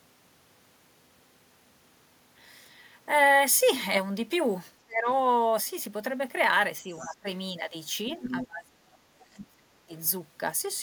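At 4.85 to 5.07 s and again at 6.82 to 7.28 s the speech drops sharply, by about 25 dB and about 20 dB. This is speech suppressed in double talk, likely an echo canceller turning down both voices at once. The waveform shows sudden notches. Inside the second dip, from 6.98 to 7.16 s, the other side's voice leaks through faintly, about 30 dB down. It likely comes from incomplete echo removal and shows as a thin secondary trace. A louder leak, about 10 dB below the speech, runs from 8.13 to 8.46 s. Suppression then follows from 8.31 to 9.7 s, about 25 dB deep, seen as a long hollowed stretch of waveform. A brief 50 ms dip of about 15 dB comes at 9.87 s.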